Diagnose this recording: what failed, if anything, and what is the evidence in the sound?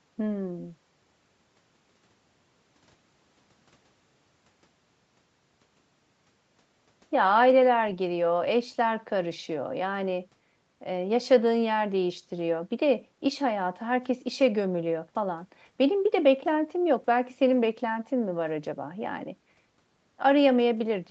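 Nothing failed in this recording, and the sound gives no evidence of any fault.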